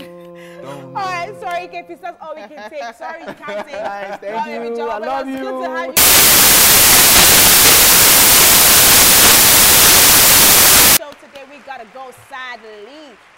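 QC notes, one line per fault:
5.97–10.97 s: samples built from the wrong bytes. For five seconds the reader combines each sample's bytes in the wrong order or alignment, so the rapidly changing low-order bits land in the most significant positions. The result is loud, harsh broadband noise.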